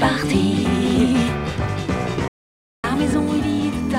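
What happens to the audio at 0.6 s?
Nothing goes wrong at 0.6 s; the audio is intact at that point.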